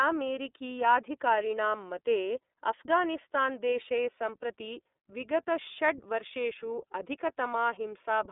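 From start to finish the speech carries the character of the iLBC codec, a narrowband VoIP coder. Nothing above about 3.8 kHz survives, and the line band runs roughly from 250 Hz to 3.6 kHz, so the sound is thin and boxy. Each 30 ms frame's excitation is coded on its own, which fits iLBC's 13.33 kbps mode, leaving a plainly audible rough, synthetic texture.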